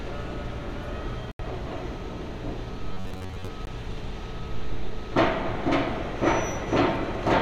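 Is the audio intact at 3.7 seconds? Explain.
No, not quite. Just before that point, from about 3.65 to 3.67 s, there's a short Bluetooth stall: the sound drops to silence for around 20 ms and then carries on. That's most likely the wireless link getting hit by interference, so packets showed up late, the headphones ran out of buffered audio and had to wait for the resent data before playing again.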